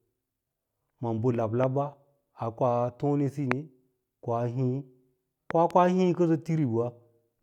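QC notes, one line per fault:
1.64–1.66 s, loud pop: a single sharp pop about 15 dB above the speech, which continues underneath. A brief voltage pulse, likely from static or a switch, has been added to the signal and shaped into a short click.
3.52–3.54 s, loud pop: one pop right after "ko tonesiyi", peaking about 20 dB over the speech. An abrupt electrical step, likely a connector or driver glitch, sums with the audio as a hard transient.
5.51–5.73 s, loud pop: two pops in quick succession, peaking about 15 dB above the speech, just before "hii kənso". Repeated voltage spikes, likely from a plug or switch, give the double thump.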